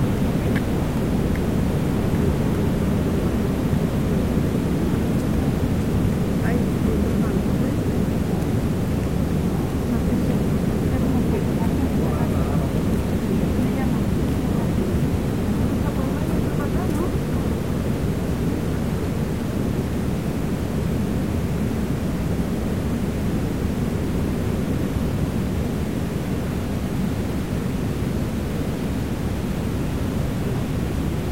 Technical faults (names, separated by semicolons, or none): low bit depth without dither